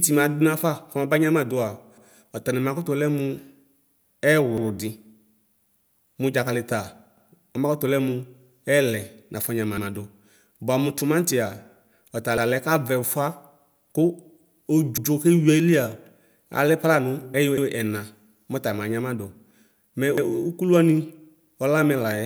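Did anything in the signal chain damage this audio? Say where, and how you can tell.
Yes. Overlapping chunks at the buffering or block-processing stage damage the speech: every 2.5 s, at 1.98, 4.58, 7.18, 9.78 (right after "ɛlɛ nafɔ"), 12.38 (just before "kavɛ ʋfʋa"), 14.98, 17.58 and 20.18 s, a 100 ms slice plays twice, heard as a stutter or click. Each block starts before the previous one ends. A spectrogram shows a duplicated 100 ms strip and a vertical seam at each join, and the waveform shows a step discontinuity there.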